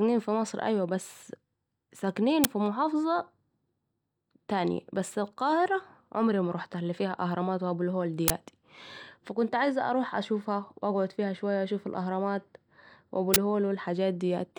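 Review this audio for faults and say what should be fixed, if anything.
Uninitialised buffer bursts at 2.44 s (10 ms) and at 8.28–8.30 s and 13.34–13.36 s (20 ms each): leftover memory played as a loud crack or burst of digital noise, not silence. Prevention: zero-fill every buffer before playback starts.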